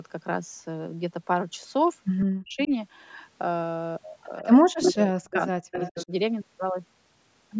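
At 2.19 to 2.25 s there's a faint echo leak: a copy of the speech comes back 124 ms late, about 15 dB down, most likely because the far end's echo canceller didn't scrub its loudspeaker pickup. More scraps follow at 2.64 to 2.68 s (about 25 dB down), 4.81 to 4.9 s (roughly as loud as the speech), 5.31 to 5.36 s and 5.71 to 6.05 s (both about 15 dB down).

Overlapping that, from 2.26 to 2.7 s and 4.41 to 6.11 s, the speech is suppressed in double talk. It drops by as much as 40 dB and cuts out in pieces, presumably because the canceller couldn't tell talker from echo.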